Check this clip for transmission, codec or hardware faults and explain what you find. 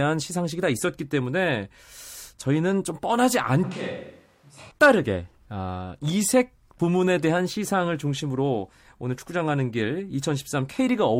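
There's one fault, a switch to a distant microphone. From 3.64 to 4.71 s the speech suddenly turns roomy and hollow, drops about 10 dB, and room noise rises to roughly 30 dB below it, likely from a far-off fallback mic taking over.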